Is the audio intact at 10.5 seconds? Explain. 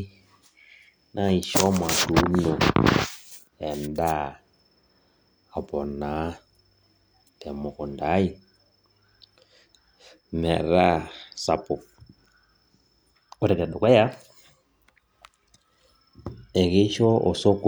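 Yes, the speech at 10.5 seconds is intact, with no dropout, glitch or other fault at that moment.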